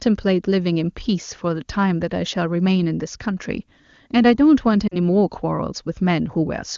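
A short speech clip in which, from 4.87 to 4.96 s, the sound briefly smears and dips before recovering roughly. These are lost AMR speech frames, about 40 ms, fitting two frames: the wideband decoder repeated its last good settings with falling gain. The clear HD Voice bandwidth points to a high AMR-WB rate.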